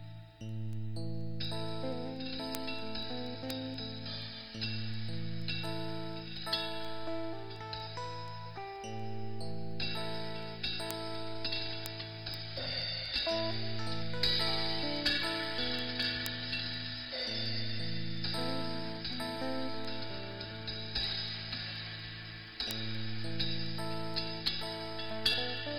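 From 0.25 s to 25.57 s, word clock ticks run through the whole clip. A sharp click arrives about every 0.2 s, around a hundred in total. That steady rate points to a receiver on its own clock, drifting by roughly 100 ppm from the sender, so a single sample is dropped or repeated at each slip. On a spectrogram each tick is a thin vertical line evenly spaced across the clip. The waveform shows a one-sample step at each one.

At 2.39 s, compressed frames skipped: the audio jumps ahead by about 100 ms, which fits one lost frame of 92.9 ms. At 15.58 s a longer gap of about 400 ms drops out, pointing to about four frames missing. The spectrogram shows content breaking off abruptly at the seam.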